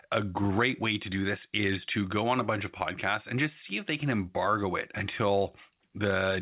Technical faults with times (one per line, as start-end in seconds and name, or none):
none